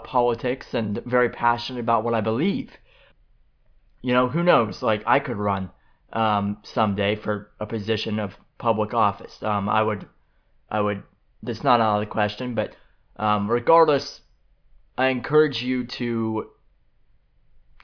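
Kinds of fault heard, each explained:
No technical faults can be heard in this recording.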